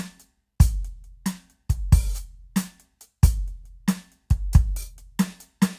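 No technical faults can be heard anywhere in this music clip. There are no dropouts, glitches or other disturbances to point to at any moment.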